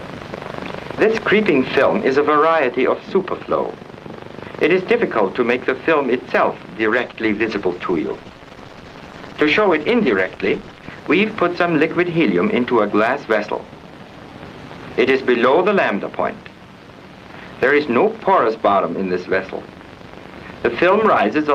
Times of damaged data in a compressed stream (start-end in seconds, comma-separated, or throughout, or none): none